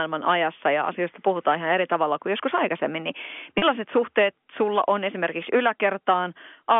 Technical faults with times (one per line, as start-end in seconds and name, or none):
3.58-3.62 packet loss with pitch repetition